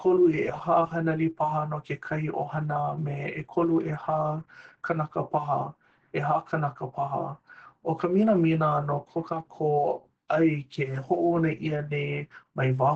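Throughout the speech the sound is muffled, with nothing above 8 kHz, and has a hoarse, slightly robotic edge. This is plainly audible Opus voice compression: the SILK speech coder in wideband mode codes the excitation coarsely, which fits a bitrate around 12 kbps.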